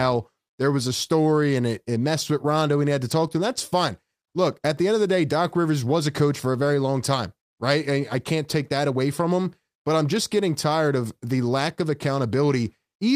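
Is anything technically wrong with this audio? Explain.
No, nothing technically wrong turns up anywhere in this speech recording, so there's nothing to flag.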